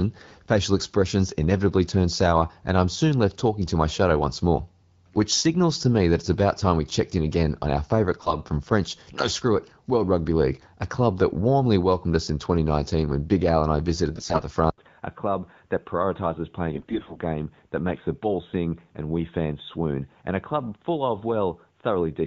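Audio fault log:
8.20–8.36 s, 14.16–14.42 s and 16.74–17.18 s, AMR bit errors: after "again on our favourite" and "and I visited", the sound turns hoarse and gargly while keeping its pitch and level, because flipped low-priority bits corrupt the pulse and gain values. A dropout would lose sound instead.
14.70 s to end, input switched to a poorer device: after an 80 ms gap, the sound is duller, with nothing above 3.8 kHz, and about 5 dB quieter, with faint new background noise. A lasting change of band and tone from that moment on likely means a different input device took over, rather than a passing codec glitch.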